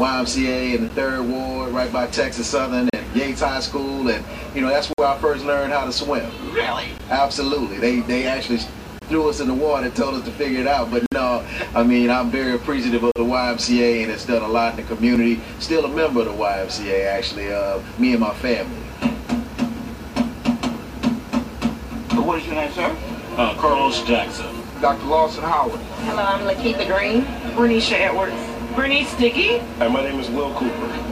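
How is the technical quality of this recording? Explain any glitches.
The recording has a gap between stream segments: brief hard-edged silences at 0.89, 2.90, 4.93, 6.98, 8.99, 11.06, 13.12 and 15.16 s, about 2 s apart. Segment timestamps leave 5 to 58 ms holes that the player fills with silence. Unlike a dropout, no audio goes missing, and the sound resumes exactly where it stopped.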